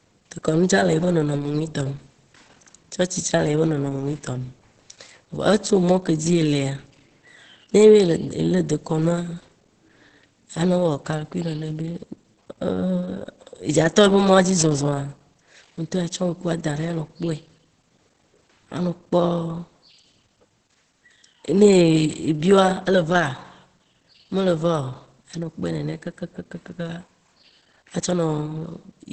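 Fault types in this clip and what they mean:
Opus compression: throughout, the speech is muffled and hoarse with nothing above 8.5 kHz, likely from Opus's speech mode at a low rate near 12 kbps.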